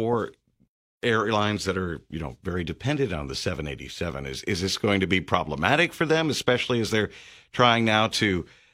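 No technical faults are audible.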